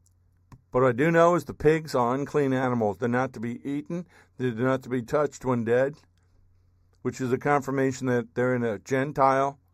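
Speech runs with a channel delay (comb filtering) throughout: one channel trails the other by a fraction of a millisecond before mono summing, so shared content cancels at evenly spaced frequencies. The first notch sits around 3 kHz, hollowing the speech with a fixed, phasey dullness.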